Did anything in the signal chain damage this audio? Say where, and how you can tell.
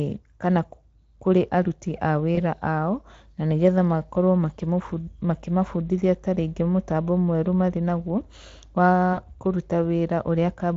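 Yes, at the network stage: VoIP packet loss concealed by the speech codec, at 2.35–2.40 s between "kana kũrĩ aruti a" and "ao na nĩgetha makorwo", and at 9.13–9.21 s. The decoder stretched its last pitch and filter, lowering the gain frame by frame. A spectrogram shows smeared, repeated harmonics, and the waveform shows a dipping envelope. The gaps fit roughly 20 ms and 40 ms of lost speech.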